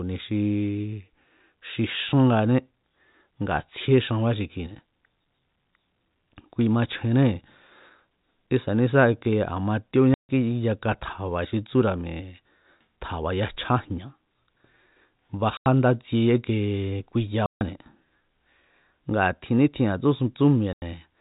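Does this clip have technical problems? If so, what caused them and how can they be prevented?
Yes. The speech has packet loss filled with silence: hard-edged dropouts at 10.14 s (150 ms), 15.57 s (90 ms), 17.46 s (150 ms) and 20.73 s (90 ms). Those lengths are all multiples of 30 ms, which fits lost 30 ms packets replaced by dead air. The telephone-band G.711 coding itself sounds clean. To prevent this, use packet loss concealment or forward error correction, and a jitter buffer on a less congested network path.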